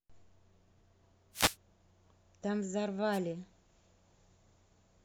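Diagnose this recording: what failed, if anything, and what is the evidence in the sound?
Wireless microphone noise hits in the analogue radio link, at 1.32–1.56 s and 3.12–3.19 s: static swishes over the speech as multipath fades drop the carrier. Noise fills these gaps, unlike the silence of a digital dropout.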